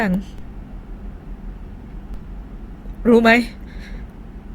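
At 0.38 s the waveform's zero line jumps, a DC step such as an offset input being switched in, and it produces a low thump. The offset lasts until 2.14 s, while the speech continues unchanged.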